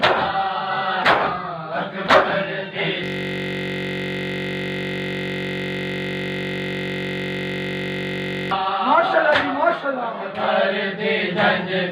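From 3.04 to 8.51 s, a system hang loop replays one 21.33 ms buffer: a steady 46.9 Hz buzz, identical waveform repeats, evenly spaced spectrogram harmonics.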